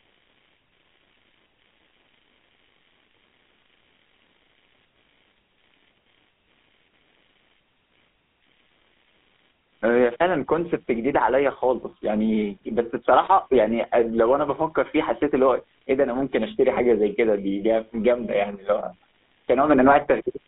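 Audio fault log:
Throughout: computer activity noise. A faint buzzing chatter sits far below the speech, pulsing at roughly 70 per second and rising and falling with the computer's load rather than with the talker. Processor and graphics activity disturbs the shared ground of the audio circuit.
Throughout: GSM full-rate codec. The speech has a buzzy, gravelly roughness, and the damage is plainly audible. Nothing survives above 3.8 kHz, and the band sounds confined to about 200 Hz to 3.6 kHz. The codec rebuilds the voice from a coarse pulse excitation, which fits a 13 kbps stream.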